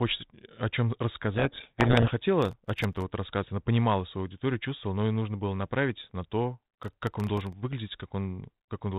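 A speech recording carried over G.726 ADPCM at 32 kbit/s, with nothing above 4 kHz. It shows two kinds of fault. From 1.34 to 2.11 s, right after "о чем", a codec payload misread buries the speech in harsh distortion: the decoder takes each G.726 code word with its bits in reversed order. On a spectrogram this appears as dense, noisy energy smeared across the whole band below 4 kHz. Processor overload crackle occurs twice, from 2.42 to 3.02 s, just before "вот рассказать она понимала", and from 6.69 to 7.53 s, after "было направить на то". Each burst is a gritty tearing made of roughly thirty missed deadlines, which fits buffers of under a millisecond each being replaced by silence. The waveform shows many tiny hard-edged dropouts to silence, and the spectrogram shows thin vertical broadband streaks.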